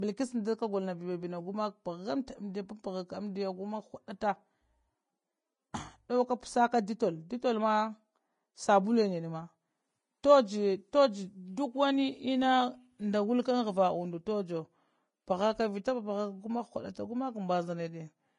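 Throughout the speech, the treble is grainy and hissy, and nothing sounds above 10.5 kHz. This is likely Vorbis compression at a low bitrate, around 29 kbps. The codec quantises the upper residue so coarsely that fine detail turns into noise.

At 2.27 s there is pre-echo. A brief hiss of about 10 ms comes just before a sharp attack. The block's quantisation noise, sized for the loud onset, spills into the quiet moment before it and softens the attack.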